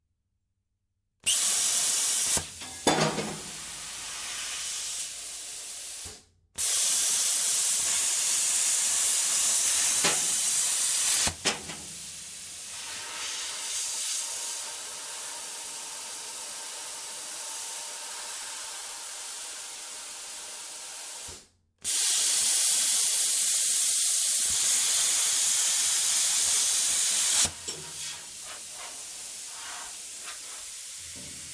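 No technical fault can be heard anywhere in this recording of sounds.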